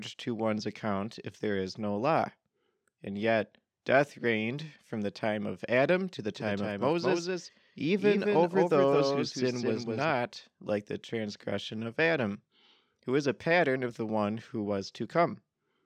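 Speech, with a doubled audio track from 6.35 to 10.11 s. A second copy trails roughly 200 ms behind, a few decibels quieter, starting and stopping abruptly. This is likely a second, slower capture path.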